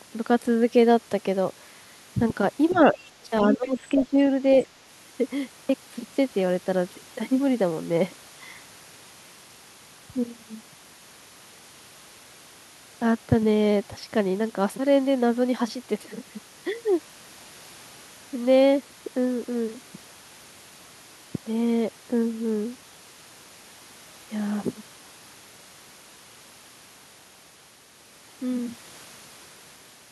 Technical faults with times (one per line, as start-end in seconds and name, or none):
2.70-2.78 other side's voice leaking through
2.72-4.19 speech suppressed in double talk
3.53-3.57 other side's voice leaking through
4.59-4.65 other side's voice leaking through